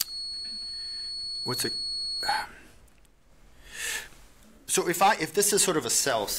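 From the start to 2.48 s, a feedback whistle sits about 10 dB under the sound: a thin, steady 4.4 kHz tone swelling and fading slowly in level, likely from a loudspeaker-to-microphone loop held just at the edge of feedback. Unlike a runaway howl, it never builds.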